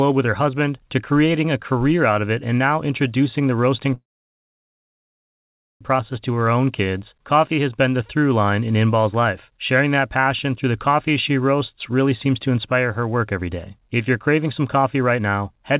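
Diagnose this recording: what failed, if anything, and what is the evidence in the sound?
From 3.94 s to 5.83 s the speech stops dead. A very brief fading continuation of the last sound gives way to about 1.8 s of silence, and then the talker resumes exactly where they left off with nothing skipped. That is a call audio freeze at the network and jitter-buffer stage. Packets were likely held up in transit, the buffer drained, and the receiver's concealment faded out. The late audio was then played intact, adding roughly 1.9 s of delay.

From 13.20 s to the end, the speech sounds rushed, running about 110% of normal speed while the pitch stays put. This is a jitter buffer speed-up in call processing. The buffer was holding more audio than its target, most plausibly the backlog left by the earlier stall. The receiver trimmed short pitch-period-length slices over and over, removing roughly 0.3 s in total. 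The audio stays limited to 4 kHz by the G.711 mu-law call codec throughout.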